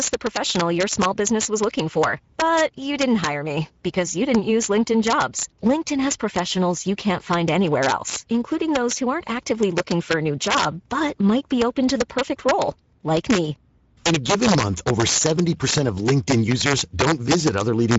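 Right from the start and all the way through, the speech has integer overflow on its loudest moments. The level was pushed about 6 dB past full scale, and instead of being held at the ceiling, those peaks wrapped around to the opposite extreme. Only a small slice of the samples, something like half a percent, cross the line, but each one lands as a harsh, snapping crack, much nastier than ordinary clipping would be.

Layered over the whole clip is the sound of the Speex codec, and the damage is plainly audible. Speex models speech with a CELP predictor and spends a limited budget on the excitation, so the voice comes out grainy and a bit hoarse rather than clean. The sound fits a mid-rate setting around 16.8 kbps. The top end stops near 7.7 kHz, and the upper band above roughly 4 kHz has that smeared, noise-filled texture instead of real detail.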